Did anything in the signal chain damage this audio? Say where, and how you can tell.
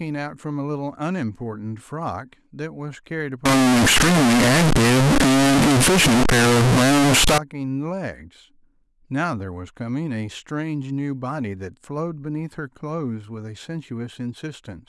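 Yes. Float read as integer from 3.45 to 7.38 s, at the sample-format conversion stage. The speech turns into a loud, harsh, nearly square wave at an almost fixed, high level, with background noise as loud as the speech. Pitch still comes through. This likely comes from 32-bit float samples being read as 32-bit integers, so sign and exponent bits dictate the level.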